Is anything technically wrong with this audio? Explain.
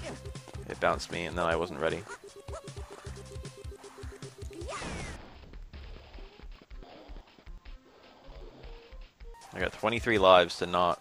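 Yes. From 5.16 s to 9.39 s the sound drops an octave and turns doubled and choppy, stuttering about 10.8 times a second, while its overall pace stays normal. This is interleaved audio read as planar. Each block of about 93 ms, which fits a 4096-sample block, alternates left and right samples, but the first half is read as left and the second as right. Both halves play together at half speed, giving the octave drop.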